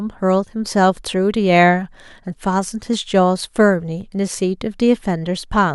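Dropped samples at 2.94 s and 4.01 s in this speech recording: each is a single sharp click, a thin vertical line across the spectrum, likely caused by a tiny fraction of a millisecond missing from the stream, so the waveform jumps abruptly to a later value.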